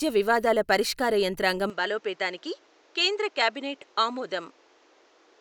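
Speech recording; at 1.70 s, right after "వివాదాల పరిష్కార యంత్రాంగం", the sound abruptly turns duller and about 5 dB quieter, with nothing above 8 kHz and new background noise, likely an input switched to a poorer device.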